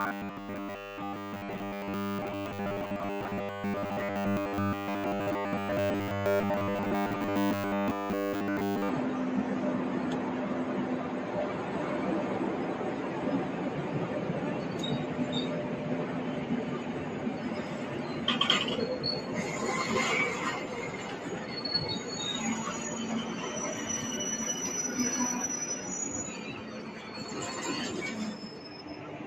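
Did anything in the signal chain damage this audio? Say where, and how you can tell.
Yes. From 0.01 to 8.89 s the sound becomes a rigid, metallic buzz pitched at 100 Hz. This is robotic sound from repeated short buffers, likely at the driver or buffer stage. A 10 ms chunk keeps repeating while most of the real audio is skipped.

For the whole clip, a noise suppressor applied to music or sounds is at work in call processing. It treats steady tones, ambience and tails as noise. Attacks get through, but held parts sink by roughly 5 dB. The level pumps and thins.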